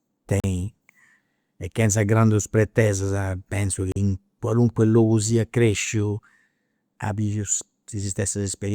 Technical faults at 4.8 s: none

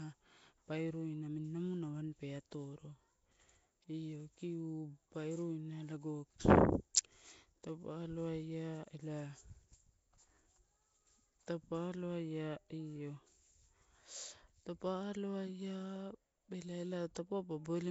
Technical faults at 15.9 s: Nellymoser compression

